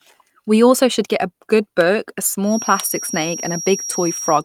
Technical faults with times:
2.41-4.44 feedback whistle

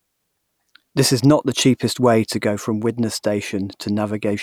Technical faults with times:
1.24 electrical switching spike

